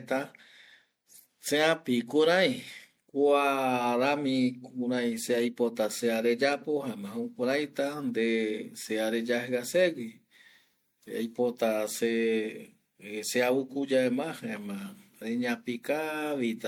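From start to finish the speech carries a swirly, hollow smear, with consonant attacks blurred and a grainy wash of built-up noise. This is generation loss, likely from the audio being run through a lossy MP3-style codec around four times, with each re-encode quantising on a shifted frame grid so holes and noise pile up. What separates it from a single low-bitrate encode is that the smearing sounds worse than a rate near 96 kbit/s would give on one pass.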